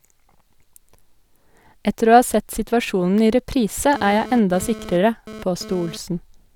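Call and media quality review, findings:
GSM phone buzz, 3.94 to 5.97 s, right after "sett situasjonen i reprise". Hard raspy 217 Hz buzz, lots of harmonics, about 16 dB under the speech. Nearby 2G handset doing a data transfer; audio front end rectifying its RF bursts.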